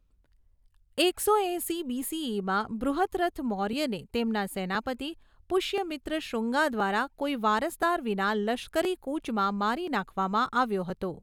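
From about 0.67 s to 10.9 s there's a click roughly every 1.02 s, about ten in all, ticking along under the speech like a slow metronome. That steady spacing points to clock drift buffer slips: two devices likely running on separate clocks that disagree by around a tenth of a percent, so the buffer between them creeps until a few dozen samples get dropped or repeated, leaving a discontinuity each time.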